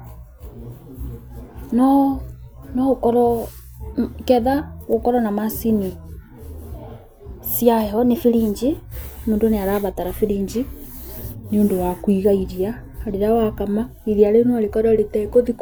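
From 7.98 to 8.77 s the speech runs about 6% fast and its pitch rises by roughly a semitone. It then snaps back. From 11.45 to 12.24 s the opposite happens: about 6% slow and roughly a semitone flat. Both are a drift correction step. Software matching two clocks likely jumped the playback rate to drain, then refill, its buffer. Because speed and pitch move together, the voice briefly sounds detuned.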